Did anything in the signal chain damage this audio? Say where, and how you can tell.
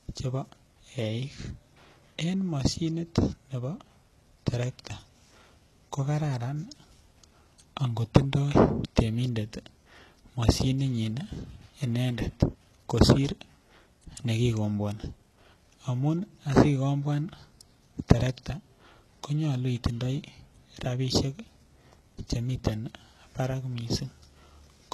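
Yes, at the codec stage, throughout the speech. The treble sounds present but synthetic: sibilants come out gritty and lisping, and nothing exists above about 12.3 kHz. That pattern likely comes from HE-AAC compression at a very low rate, consistent with roughly 16 kbps. The codec keeps only the lower spectrum and fakes the top band by copying lower content upward under a coarse envelope, so upper harmonics no longer align with the real ones.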